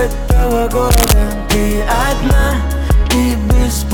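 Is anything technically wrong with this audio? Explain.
Yes. Cable scratch noise runs from 0.91 to 1.13 s, about a fifth of a second. Its likely cause is a worn cable, connector or control being moved, so that the contact resistance jumps about rapidly and injects dense, irregular bursts of noise into the signal. It sits only slightly below the level of the sound itself and is heard as a brief scratching, rustling crackle laid over the audio.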